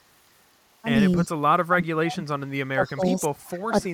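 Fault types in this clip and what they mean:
Echo leak: A faint delayed copy of the speech, trailing it by 278 ms, appears briefly at 1.18 to 1.25 s and again from 2.86 s to the end, sitting around 30 dB and then around 25 dB below the direct speech. The likely cause is a far-end echo canceller letting some loudspeaker pickup through. On a spectrogram it shows as weak, time-shifted copies of the harmonic bands; the waveform shows a low-level smear trailing the speech in those stretches.
Speech suppressed in double talk: The speech level dips sharply in four stretches: 1.18 to 1.3 s by about 20 dB, 1.67 to 2.27 s by as much as about 40 dB, 2.72 to 3.32 s by about 15 dB, and 3.69 s to the end by about 15 dB. This is likely an echo canceller ducking everything while both sides talk. The waveform envelope caves in abruptly, and the spectrogram shows harmonics fading or gapping.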